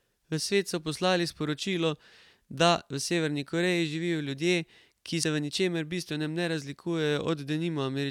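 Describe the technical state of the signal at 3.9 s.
At 3.9 s the signal is intact, with no technical fault present at that moment.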